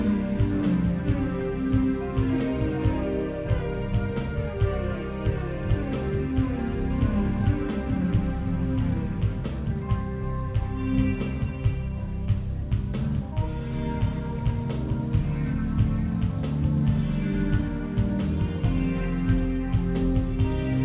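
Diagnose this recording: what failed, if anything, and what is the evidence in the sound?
Nothing failed; no faults heard.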